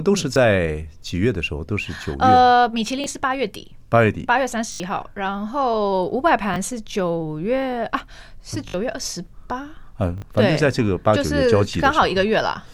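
It's a speech clip with repeated buffer stutters at 0.34, 3.04, 4.72, 6.54, 8.68 and 10.18 s. Each time the playback device didn't get fresh audio in time and replayed its last chunk, whose length fits a 20 ms buffer, so a tiny slice sounds two or more times with hard joins. The ones at 0.34, 3.04 and 6.54 s are brief clicks. At 4.72, 8.68 and 10.18 s the chunk loops several times into a short buzz, and a bit of speech drops out.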